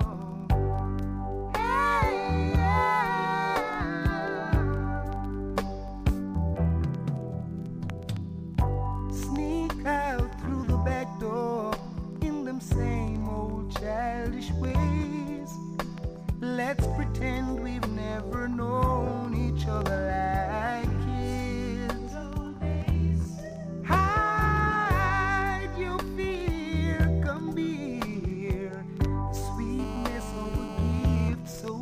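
Near the end of the audio, from 29.79 to 31.29 s, a GSM phone buzz cuts in: a hard, raspy tone at 217 Hz, about 12 dB below the programme, that holds steady as a phone transmitting in a call would. The audio circuit is picking up the handset's radio pulses and rectifying them into sound. What separates it from mains hum is the 217 Hz pitch, which is neither 50 nor 60 Hz or a multiple of them, and the dense, buzzy stack of harmonics in place of a smooth low drone. Right after, from 31.33 to 31.69 s, come GSM signalling bursts, much quieter, which fits the phone still being in the call while its user falls silent and it sends only brief groups of pulses. These are heard as even ticks with a longer 217 Hz buzz twice a second. That even rhythm with its regular longer buzz distinguishes them from random clicks or digital dropouts, and the shared 217 Hz rate ties them to the same phone.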